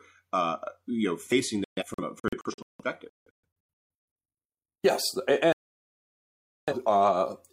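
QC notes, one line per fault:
1.64–3.37 s: digital broadcast dropout. Just after "uh you know facing", the sound breaks into several short silent holes. The longest lasts about 0.17 s, and the gaps add up to about 1.24 s. The receiver muted whenever frames arrived corrupt or missing. What was sent in those gaps is gone.
5.53–6.73 s: digital broadcast dropout. The sound mutes again for about 1.15 s in total. Failed frames were silenced and not repaired.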